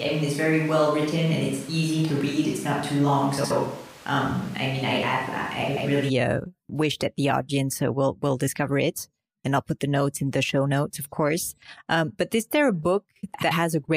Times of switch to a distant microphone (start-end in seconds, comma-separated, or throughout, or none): 0.00-6.08